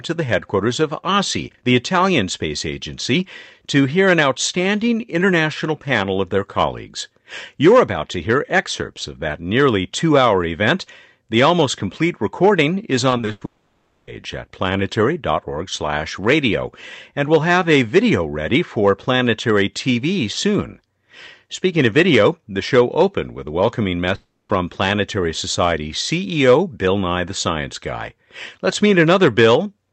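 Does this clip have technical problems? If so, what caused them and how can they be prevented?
Yes. Right after "almost complete recording is", from 13.09 to 13.43 s, repeated packet loss gives a choppy, robotic stretch: five gaps, the longest 100 ms, each patched by stretching the last sound. A steadier network path or a deeper jitter buffer would prevent it.

Then, from 13.45 to 14.09 s, and again after "opened with a welcoming" from 24.15 to 24.51 s, the audio turns into a fading buzz or hiss and then goes silent, likely from a long network dropout. The lost stretches, 0.62 s and 0.34 s, never come back. A more reliable connection, or redundancy such as forward error correction, would help prevent this.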